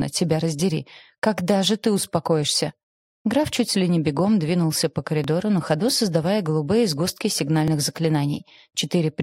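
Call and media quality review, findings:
Small forward jump in the audio at 5.24 s, then another at 7.68 s. No gap of silence at either point; the material simply skips ahead, roughly 10 ms lost at the first and a few milliseconds at the second. Likely cause: dropped buffer (overrun) in the capture path, where samples were not read before the hardware overwrote them, so the surviving audio on either side is spliced directly together.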